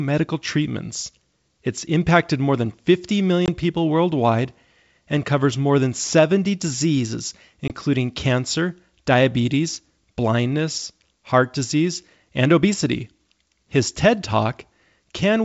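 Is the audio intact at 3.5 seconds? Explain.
No. Packet loss on an ADPCM call opens a hard-edged silent hole from 3.46 to 3.49 s, about 20 ms, likely a single lost packet, just before "people worldwide and covers". The receiving G.722 decoder, running at 64 kbit/s, loses track of the sender's predictor and step size, so speech resumes slightly distorted. That brief mistracking after the gap, settling over tens of milliseconds, sets it apart from a clean dropout.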